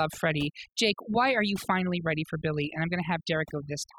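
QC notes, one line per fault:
Throughout, overdone noise removal: the noise reduction was set far too aggressively for this noisy speech recording, so any frequency band sitting near the tool's noise estimate is pulled deep down or switched off entirely. Quieter parts of the voice fall below that threshold and vanish along with the noise. What remains is a background of near silence dotted with twinkling, chirpy specks where isolated bands flicker on and off.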